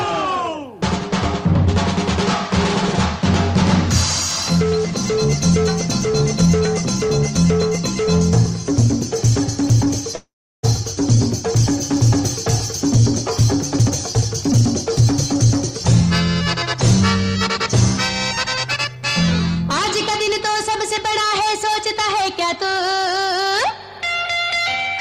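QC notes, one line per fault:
10.15–10.65 s, call audio freeze: the last sound smears into a fading buzz and then falls silent for about 0.35 s before resuming where it left off. This is likely packets held up in transit draining the jitter buffer. The 0.48 s gap is inserted and nothing is lost, so the delay grows by that much.
13.73–15.46 s and 18.65–22.79 s, jitter buffer speed-up: the audio runs faster at unchanged pitch, at 116% speed in the first stretch and a subtler 104% in the second. The receiver trims pitch-period-sized slices repeatedly to shed surplus buffered delay, roughly 0.3 s and 0.15 s respectively.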